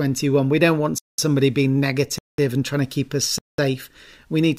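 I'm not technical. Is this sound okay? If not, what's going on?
No. The speech drops into silence for about 0.2 seconds three times: at 0.98 s after "don't want", at 2.18 s after "somebody being", and at 3.38 s after "trying to keep us". This is a gap between chunks. The audio arrived in one-second pieces, and a short silence was left at each join, either from padding or from playback starting each piece late. Nothing is missing, but the speech stops and restarts at each join.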